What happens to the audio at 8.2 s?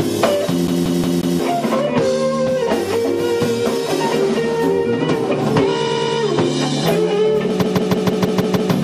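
At 8.2 s the audio is inside a repeated-frames stutter from 7.61 to 8.71 s: one 157 ms block of compressed frames plays seven extra times, adding about 1.1 s. Under it, the plainly audible watery, swirly MP3 compression continues, likely from MP3 encoding at a low bitrate around 64 kbps that drops weak frequency lines.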